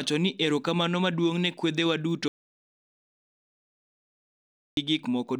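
A speech recording with an audio dropout to silence: right after "ne kwedhewa duto" the sound cuts out at 2.28 s and returns mid-flow at 4.77 s, losing about 2.49 s. It's likely a lost input. The waveform shows a dead-flat line there; the spectrogram, a blank gap without room tone.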